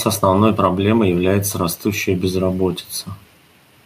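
No technical faults can be heard in this speech recording.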